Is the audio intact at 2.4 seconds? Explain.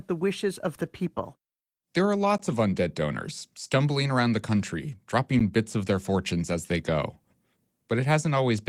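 No. At 2.38 s there is a gap between chunks, a hole of about 12 ms just before "of undead donors stumbling". The speech arrived in 3-second chunks, and silence sits at the join. Nothing is lost. The sound simply stops and restarts.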